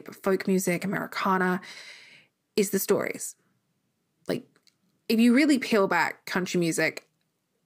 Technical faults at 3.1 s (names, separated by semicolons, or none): none